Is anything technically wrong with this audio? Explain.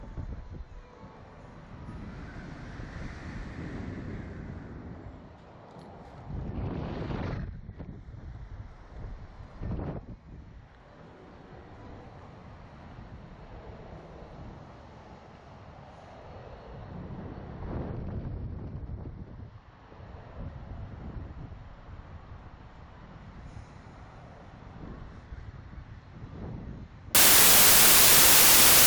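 Yes. From 27.15 s to the end, a wrong sample width fault, which fits 32-bit samples read as packed 24-bit, mixes bytes, burying the sound in loud noise, slowed to 0.75 speed and lower in pitch.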